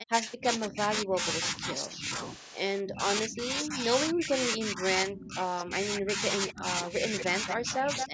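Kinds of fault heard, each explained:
Speech suppressed in double talk: The speech keeps dipping and breaking up in pieces, from the start to about 2.1 s and again from 2.81 s to the end, dropping as much as about 40 dB. It's likely an echo canceller ducking this talker while the other side talked over them.
Echo leak: A delayed copy of the speech, 228 ms behind, gets through: a short scrap at 6.47 to 6.53 s, then a longer stretch from 7.19 to 8.08 s, only about 5 dB under the speech. This is likely loudspeaker echo that a canceller didn't fully remove.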